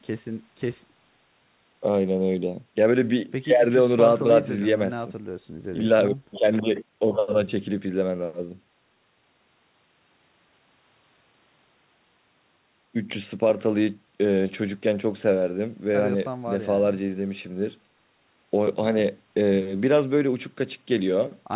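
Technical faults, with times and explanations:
Nothing stood out on listening to this speech, which reaches the ear through a G.711 call path with nothing above 4 kHz.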